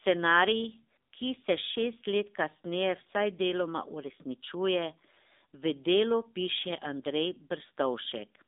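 AMR narrowband mobile codec damage runs throughout this speech clip. Nothing passes above 3.7 kHz or below 250 Hz, and the voice, rebuilt by a vocal-tract model driven by a few pulses per 5 ms subframe, has a plainly buzzy, synthetic edge that fits a low 7.4 kbps mode.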